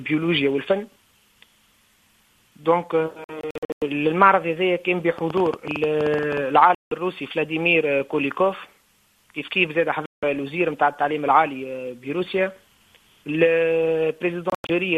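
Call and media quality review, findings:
Digital broadcast dropout: audio mutes in short holes at 3.24–3.82 s (about 312 ms lost, longest hole 96 ms), 6.75–6.92 s, 10.06–10.23 s (168 ms each) and 14.50–14.70 s (144 ms lost). Receiver muting on failed-checksum frames; content unrecoverable.

Train of clicks, 5.18–6.38 s: roughly 15 similar pops at about 13.5 per second, unevenly spaced, peaking around 10 dB above programme level. Likely external interference or a struggling interface injecting repeated pulses into the path.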